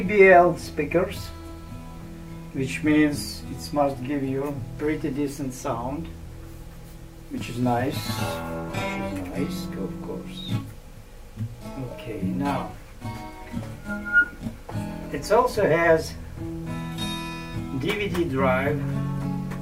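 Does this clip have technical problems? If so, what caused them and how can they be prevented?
No, no technical faults can be heard here.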